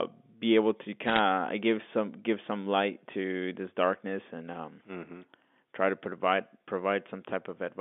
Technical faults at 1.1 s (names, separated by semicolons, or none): bit errors on a digital phone line